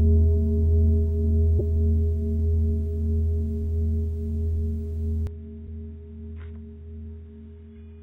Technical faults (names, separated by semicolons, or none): damaged data in a compressed stream; input switched to a poorer device